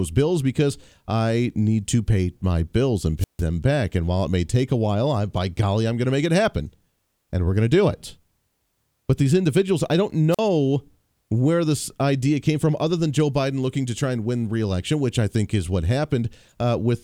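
At 3.18 to 3.43 s and 10.31 to 10.40 s, a wireless microphone squelch dropout mutes the speech for 152 ms and then 43 ms as the radio signal fades. Hiss swells before each silence, unlike a clean digital dropout.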